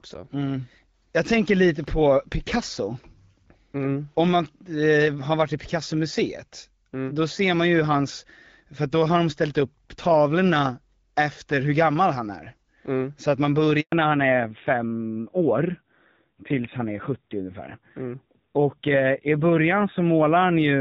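A speech recording carried over HD Voice, with light wideband codec texture that fits a rate around 12.65 kbit/s, suffers a handover gap at 13.80 s: the signal drops to silence for 120 ms, showing as a blank vertical strip on the spectrogram and flat waveform. From 13.92 s onward, fallback to narrowband cuts everything above 4 kHz, leaving an empty upper band on the spectrogram and a duller, rougher sound consistent with a lower-rate narrowband codec.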